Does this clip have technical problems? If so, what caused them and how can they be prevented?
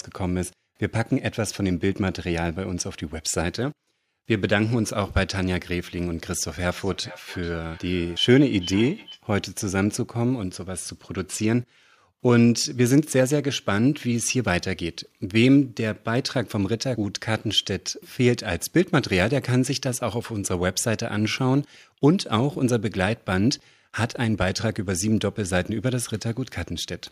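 Yes. From 6.71 to 9.24 s the speech shows feedback echo between two devices: a second device in the room plays back what this microphone sent, the microphone picks it up again, and the local echo canceller can't remove a sound its own device didn't play. Each syllable returns roughly every 0.4 s, peaking about 19 dB below the speech and sounding thinner and more ringing. On a spectrogram, faint copies of each harmonic pattern trail the original at that spacing; the waveform shows small repeated bursts between syllables. To prevent it, mute the speaker and microphone on all but one device in the room.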